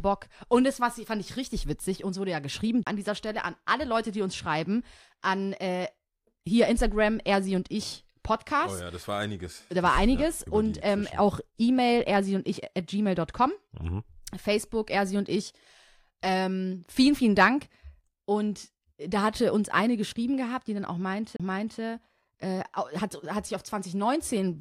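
CD skips at 2.83 to 2.87 s, after "wurde ja geschrieben" and before "an dieser", and at 21.36 to 21.40 s, after "gehabt die dann auch", break this speech clip: the laser jumps tracks, and playback mutes for roughly 30 ms, then resumes elsewhere on the disc.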